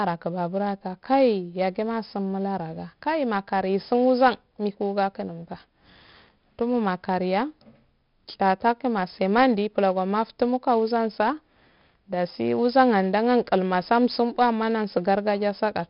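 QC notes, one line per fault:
Throughout: 4-bit ADPCM compression. Each sample of the speech is coded as a coarse 4-bit step from a prediction, so a gritty hiss rides on every loud syllable and follows its level, with heavy damage audible as roughness on sharp consonant onsets where the adaptive step lags. Nothing is present above 5.3 kHz, which fits a sample rate near 11 kHz and roughly 44 kbps, leaving the speech dull and muffled.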